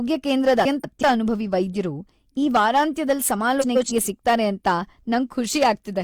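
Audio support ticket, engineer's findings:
Hard clipping throughout. Speech peaks flattened, pushed about 7 dB past full scale, so only a couple of percent of samples hit the ceiling. Crackly grit on loud syllables. Probably gain set too hot ahead of the converter or a fixed-point stage.

Frames out of order at 0.64–1.03 s and 3.61–3.92 s. Garbled flutter. Two adjacent blocks, roughly 190 ms and 140 ms each, swapped and decoded that way, which points to a few codec frames per block. Nothing dropped.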